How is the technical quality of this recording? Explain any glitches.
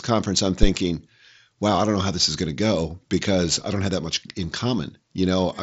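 The recording carries one glitch, a phantom power thump at 0.63 to 0.71 s, just after "conference I'm". A supply switched on a live input sends a voltage step through the coupling capacitors, heard as a deep thump decaying in about 17 ms. The speech is band-limited to roughly 7.7 kHz, consistent with an mSBC Bluetooth headset link.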